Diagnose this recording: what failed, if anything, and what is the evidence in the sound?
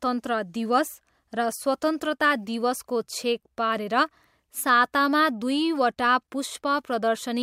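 Nothing failed here that I can hear: the speech comes across without any fault to trace back to a stage in the chain.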